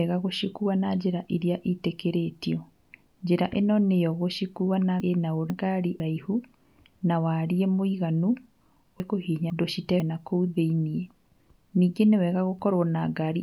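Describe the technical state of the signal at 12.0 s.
At 12.0 s the speech signal is intact, with no fault present at that moment.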